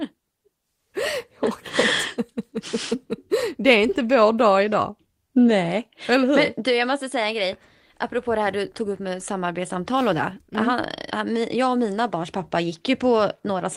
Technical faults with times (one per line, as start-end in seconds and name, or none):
none